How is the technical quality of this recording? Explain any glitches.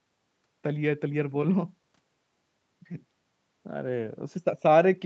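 No glitches turn up anywhere in this speech, which sounds like it came through a call connection, with nothing above about 8 kHz and the normal coding texture that fits a voice codec at a modest bitrate.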